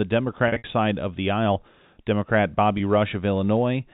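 From 0.48 to 0.64 s, packet loss with pitch repetition breaks up the sound. About 120 ms is lost over 160 ms, the longest gap 60 ms. The receiver repeats the last pitch period, giving a held, buzzy smear. At 2.78 s, a single 20 ms loss gives a brief buzz.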